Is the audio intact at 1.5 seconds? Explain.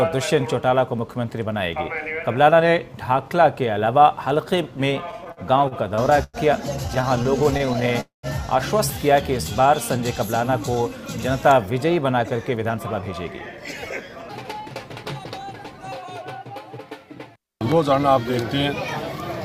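Yes, at 1.5 seconds the audio is intact, with no dropout, click, distortion or other fault at that moment.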